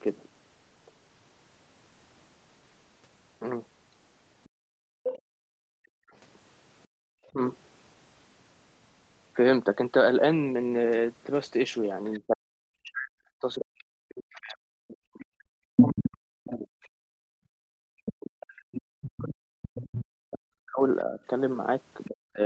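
At 4.44 s a second voice starts bleeding in underneath, around 10 dB below the talker, and hangs on until 5.19 s. That's the other side's voice leaking through, most likely because the far end was playing on a loudspeaker and the echo canceller didn't scrub all of it out of the mic. Almost on top of that, from 4.49 to 7.03 s, the room sound keeps ducking out, as much as about 36 dB down, for about a second in total. That's background gated by the echo canceller: it clamped the mic hard while the loudspeaker was active and let go afterwards. Between 5.95 and 7.38 s the talker gets cut too, with short holes of up to about 40 dB adding up to roughly a fifth of a second. That's speech suppressed in double talk, likely the canceller failing to tell its own talker from the echo while both sides overlapped.

The big stretch comes later. From 12.05 to 16.87 s the leaked voice is roughly as loud as the talker, so you get two voices competing. 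From 12.19 s right up to 22.41 s the talker keeps dropping out, again up to about 40 dB, for around seven seconds in total. That's the double-talk suppression chewing through most of the back half. One more short leak sits at 19.63 to 20.01 s, about 15 dB down. Throughout, nothing reaches above 8 kHz, which fits an Opus call path running at something like 20 kbps.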